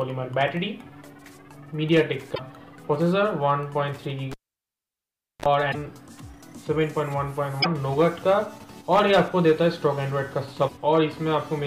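At 2.31 to 2.40 s there is damaged data in the compressed stream. Corrupted bytes make the decoder misread frames, lose sync and hunt for the next frame header. The result is a brief disturbance in the sound.

At 4.32 s the cable is pulled and plugged in again. A pop opens about 1.09 s of near silence. A 35 ms burst of 50 Hz mains buzz follows as the tip makes partial contact. A second pop marks the return at 5.46 s.

The stream damage recurs at 5.68 to 5.75 s, 7.59 to 7.66 s and 10.65 to 10.71 s.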